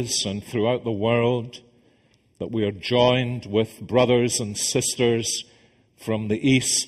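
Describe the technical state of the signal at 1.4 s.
At 1.4 s you're hearing channel delay, which causes comb filtering, and it runs through the whole clip rather than kicking in at that point. One channel trails the other by something like 0.4 ms, so when the two fold down to mono, the content they share cancels at evenly spaced frequencies, starting at roughly 1.5 kHz. Those fixed notches give the sound a hollow, phasey character.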